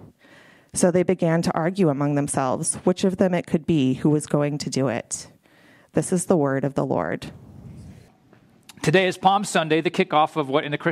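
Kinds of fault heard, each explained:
Nothing stood out on listening to this clip.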